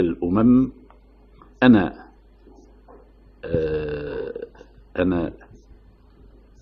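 At 1.42 to 1.49 s and again at 4.06 to 4.13 s, AAC frame loss with concealment leaves a brief smeared, noisy patch. Each gap of about 43 ms fits one lost frame, which the decoder bridged by reusing the preceding spectrum.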